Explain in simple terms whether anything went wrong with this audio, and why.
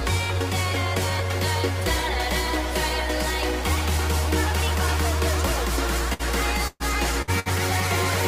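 Near the end there's a burst of packet loss, four times: 6.13–6.22, 6.67–6.83, 7.22–7.30 and 7.39–7.49 s. Each time roughly 60 ms of audio (120 ms in the second) never arrived, so the player smeared the last sound out, fading it, then jumped ahead.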